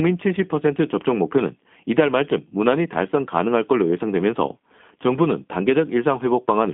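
Speech passed through a G.729 codec throughout: rough, slightly synthetic texture consistent with 8 kbit/s frame-based coding, band-limited to 200 Hz–3.5 kHz, spectrogram showing nothing above 3.5 kHz.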